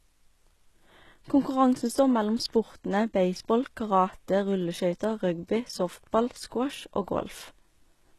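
From start to finish the speech carries plainly audible codec damage, most likely from HE-AAC compression. The upper band sounds synthetic: rather than the original treble, it seems rebuilt from copied lower bands under a coarse envelope, so s sounds come out gritty and lispy with a metallic edge. Nothing is present above 12.3 kHz, and the overall degradation fits a very low bitrate in the region of 16 kbps.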